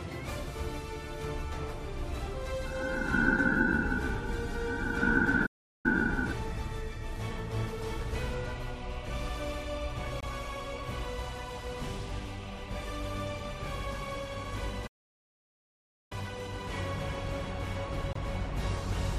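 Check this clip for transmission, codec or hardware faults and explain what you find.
Four faults are audible, in two kinds.

At 5.46–5.86 s and again at 14.87–16.12 s there is a playback stall: the audio halts mid-flow for about 0.38 s, then about 1.24 s, and resumes. The likely cause is the player's buffer running dry or its thread being blocked, leaving the output silent until it recovers.

At 10.21–10.24 s and 18.13–18.16 s there is a Bluetooth dropout: a short hole of about 23 ms, after which the audio continues as though it had kept playing. A wireless packet likely arrived too late and was discarded, which fits a single lost frame.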